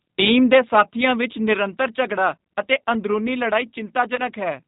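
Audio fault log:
throughout G.729 codec. The speech is rebuilt from a vocal tract filter, a pitch predictor and a few pulses per frame rather than carried as a waveform. The result sounds plainly rough and slightly synthetic, with a hard band limit and nothing heard above 4 kHz. The sound fits an 8 kbit/s G.729 stream.
4.16 to 4.21 s VoIP packet loss concealed by the speech codec. About 20 ms of audio went missing, which fits two lost 10 ms frames. The decoder filled the gap by repeating its last pitch and filter settings with falling gain. The speech briefly stretches into a buzzy tone or coloured noise that fades. Each frame depends on the one before, so the disturbance lasts past the gap itself.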